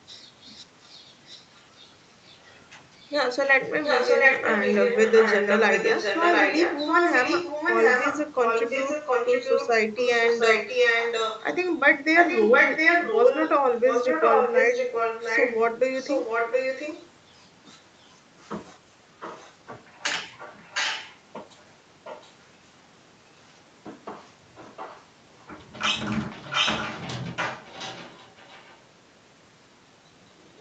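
A delayed copy of the speech trails it by about 710 ms right from 0.07 to 2.39 s, faint there, then comes back at 2.97 to 17.04 s as loud as the speech itself. Shorter scraps follow at 18.02 to 18.53, 19.2 to 19.54, 20.38 to 22.33, 24.55 to 25.46 and 26.2 to 28.77 s, ranging from barely there to nearly full level. That's an echo leak, likely a loudspeaker on the far end whose echo canceller let its own playback slip back into the call.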